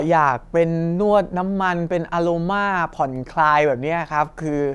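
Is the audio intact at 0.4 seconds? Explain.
Yes, at 0.4 seconds the speech plays through cleanly, with no dropout, click, distortion or other fault to be heard at that moment.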